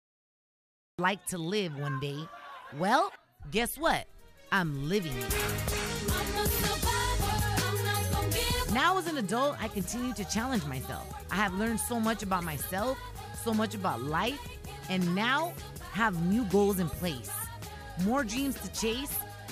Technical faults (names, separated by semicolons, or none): cut-off start